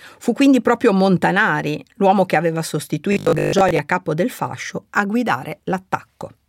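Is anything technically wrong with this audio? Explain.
Yes. From 3.13 to 3.79 s, between "l'uomo che aveva" and "a capo del fascio", the speech turns into a rigid, metallic buzz at 50 Hz that only loosely tracks the words. This is robotic sound from repeated short buffers, likely caused by audio arriving too seldom, so a roughly 20 ms chunk is replayed to fill the gaps, covering about half of that stretch while the real audio is skipped.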